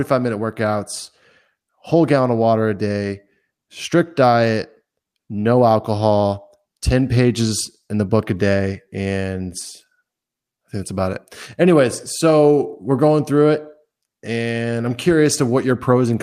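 No technical faults can be heard anywhere in the recording. There is nothing here to place in time or explain.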